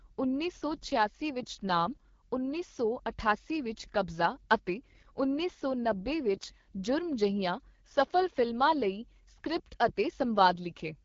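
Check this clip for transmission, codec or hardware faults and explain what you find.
One codec fault runs through the whole clip: the AMR wideband (HD Voice) codec at a low bitrate.

From start to finish the speech sounds rough and raspy, with a gritty, buzzy edge, and nothing sits above about 7.3 kHz. AMR-WB models speech up to 6.4 kHz as pulses exciting a vocal tract filter, then fills the band to 7 kHz with shaped noise. The damage is plainly audible, which points to one of its two lowest modes, consistent with about 8.85 kbit/s, where too few bits describe that excitation.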